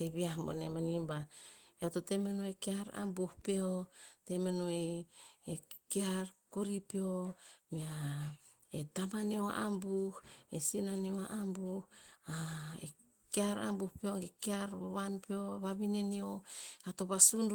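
The speech carries Opus voice compression in its hybrid mode with full bandwidth reaching about 20.1 kHz and only light coding traces, which fits a bitrate of around 20 kbit/s.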